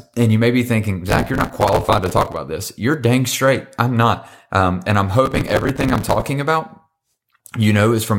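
Speech with two bursts of processor overload crackle, at 1.09–2.37 s after "you may be thinking" and 5.26–6.22 s after "and I'm". Missed deadlines on buffers of roughly 5 ms replay scraps of old audio with hard edges. The result is a dense, gritty tearing rather than one clean dropout, and it stops when the load passes.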